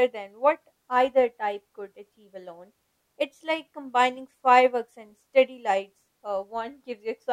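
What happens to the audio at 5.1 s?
Nothing goes wrong at 5.1 s; the speech runs through that moment intact, with no dropout, click or distortion.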